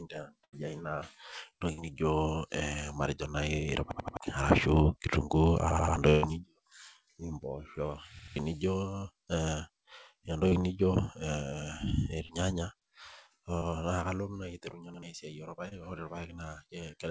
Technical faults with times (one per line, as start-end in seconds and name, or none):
0.44-0.56 burst of packet loss
1.73-1.81 burst of packet loss
3.91-4.17 repeated buffer
5.70-5.96 repeated buffer
6.10-6.26 burst of packet loss
8.19-8.36 repeated buffer
10.49-10.55 short concealed packet loss
12.26-12.32 short concealed packet loss
13.58-13.64 short concealed packet loss
14.94-15.02 repeated buffer
15.68-15.74 short concealed packet loss